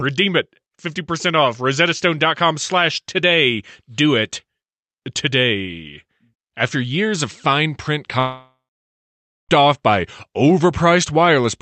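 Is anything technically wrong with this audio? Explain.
Yes. From 8.19 s to 9.51 s the speech breaks off: the last sound is stretched into a buzzy, hissy tail that fades away, leaving roughly 0.9 s of silence before the speech resumes at 9.51 s, with about 1.3 s of it missing. This is likely a long network dropout. Packets stopped arriving, so the receiver extended the final sound to cover the gap, then gave way to silence until audio flowed again.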